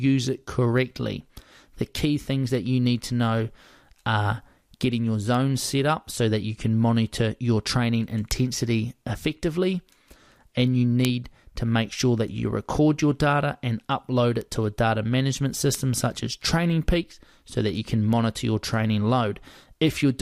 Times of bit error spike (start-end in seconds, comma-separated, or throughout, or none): 5.35, 8.31, 11.05, 14.41, 15.75, 18.13